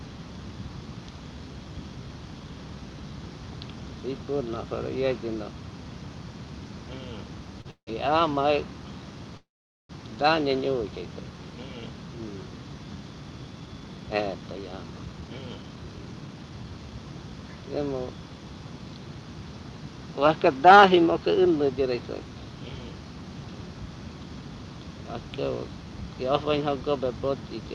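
At 7.61 s comes a short stall from a late packet. The jitter buffer ran dry, so the last sound is held about 34 ms with a faint buzz. Nothing is lost.

A call audio freeze follows from 7.71 to 7.89 s, and a longer one from 9.37 to 9.91 s. Each likely comes from packets held up in transit. The held sound fades into silence, about 90 ms and then 450 ms. The audio then resumes where it stopped.

From 13.53 to 16.78 s the jitter buffer speed-up trims short pitch-period pieces to shed built-up delay. The sound runs about 115% fast at unchanged pitch and feels hurried, losing roughly half a second.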